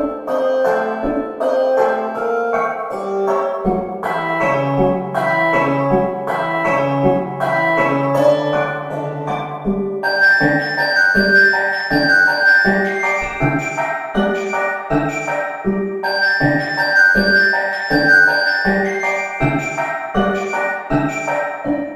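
From start to finish the clip carries sample clock jitter: the converter's timing wanders by around a microsecond or two, so each sample lands a touch early or late. That timing error becomes an amplitude error wherever the waveform is changing fast, leaving a fine roughness roughly 40 dB below the sound. Unlike a steady noise floor, this hiss swells on loud, bright passages and disappears entirely in quiet gaps.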